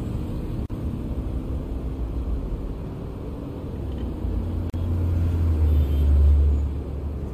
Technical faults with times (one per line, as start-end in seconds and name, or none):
0.66-0.70 gap at a join of encoded pieces
4.70-4.74 gap at a join of encoded pieces